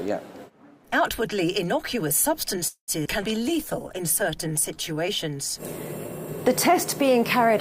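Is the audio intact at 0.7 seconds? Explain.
Yes, at 0.7 seconds the audio is intact, with no audible fault at that moment.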